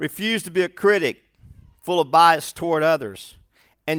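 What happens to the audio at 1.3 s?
Nothing goes wrong at 1.3 s; the speech carries on intact through that moment, with no dropout, click or distortion.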